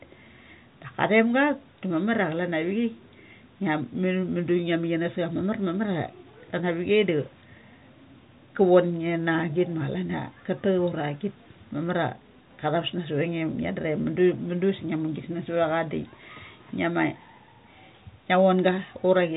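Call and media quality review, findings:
Nothing to flag on this speech clip; it carries the band-limited sound of ordinary G.711 telephone coding and no faults turn up anywhere.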